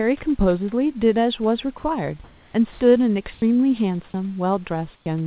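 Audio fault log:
1.78–1.84 s: sound dropped by the voice detector. About 50 ms of speech vanishes into steady hiss, likely because the sender's detector mistook speech for background and stopped sending.
2.24–2.54, 2.72–2.80, 3.34–3.42, 4.96–5.06 s: comfort noise in place of the background. The room tone turns flat and featureless, shifting in level by about −1, +7, −5 and −18 dB. This is likely synthetic fill played while transmission paused.
2.52–2.54 s: onset clipped by the voice detector. Speech resumes abruptly, missing its first 20 ms, likely because the detector reacted late to the returning sound.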